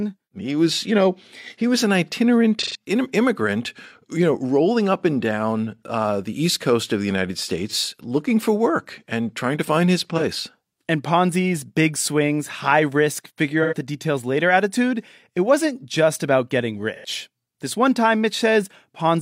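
AAC frame loss with concealment occurs at 2.62 s, 7.68 s, 10.17 s, 13.62 s and 16.95 s. Each time, the decoder fills missing frames from the last good spectrum, which produces brief smeared, noisy patches of 128, 43, 43, 85 and 85 ms. These lengths are consistent with one to three lost frames.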